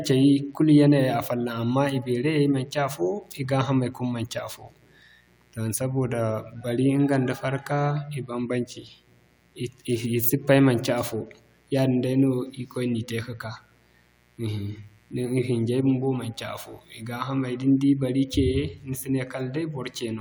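From start to finish a mains buzz sits under the speech, a steady raspy tone at roughly 40 dB below it. Switching spikes from 60 Hz mains leak in, drawing a stack of horizontal harmonic lines at 60 Hz multiples across the spectrogram.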